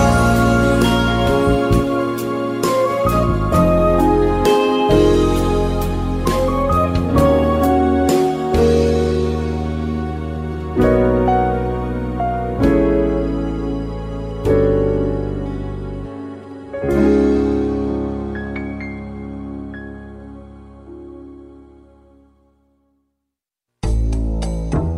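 No technical faults can be heard anywhere in the clip, so there is nothing to place in time order.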